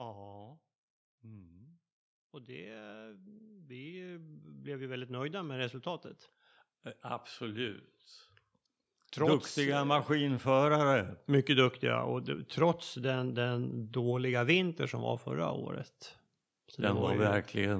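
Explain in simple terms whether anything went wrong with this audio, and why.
Twice the whole recording slowly swells louder, the speech and the background rising together, from 1.2 to 6.14 s and again from 8.93 to 13.77 s. That is automatic gain rising: the call's level control judged the input too quiet and gradually turned it up.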